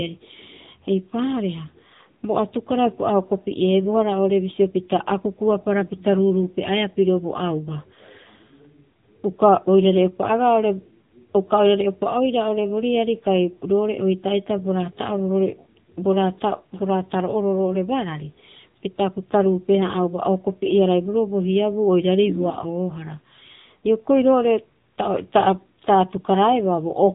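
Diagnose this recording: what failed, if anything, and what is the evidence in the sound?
Codec stage: AMR narrowband mobile codec throughout; speech sounds buzzy and synthetic, consistent with roughly 8 kbps, and a spectrogram shows nothing above 3.8 kHz.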